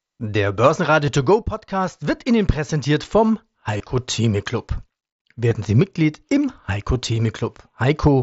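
Speech over an mSBC headset link, with concealed Bluetooth headset packet loss at 1.06 s, 3.78 to 3.80 s (after "präsentiert vom"), 5.49 to 5.51 s and 7.15 s. Lost frames were refilled with copied waveform, which shows as repeated identical cycles at steady level and brief periodic stripes on a spectrogram, consistent with one to three dropped frames.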